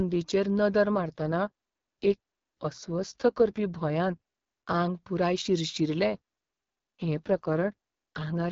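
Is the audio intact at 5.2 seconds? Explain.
Yes, at 5.2 seconds the speech is intact and runs without any audible fault, carried cleanly by the AMR wideband (HD Voice) codec at 12.65 kbit/s.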